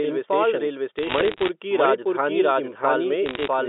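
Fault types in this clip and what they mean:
doubled audio track: A second full-band copy of the sound runs about 0.7 s behind the first at roughly the same loudness. Each syllable comes back as a clean, dry repeat with no reverb tail. The likely cause is the audio being captured twice by a slower path, or an edit leaving two copies out of step. On a spectrogram every speech pattern appears twice, shifted by that fixed gap. The waveform shows two overlapping envelopes of similar height.
bit errors on a digital phone line: From 0.99 to 1.49 s and from 3.26 to 3.48 s, the telephone-band speech picks up sharp ticks and crackle. This fits bits flipping in the 8-bit logarithmic samples at a rate of around 0.7 percent in the first burst and 1 percent in the second. Each error corrupts a single sample, and a hit on the sign or a high bit throws that sample far from its true value. The waveform shows isolated one-sample spikes. 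The spectrogram shows thin vertical lines spanning the band up to about 4 kHz, and the speech beneath them is unchanged.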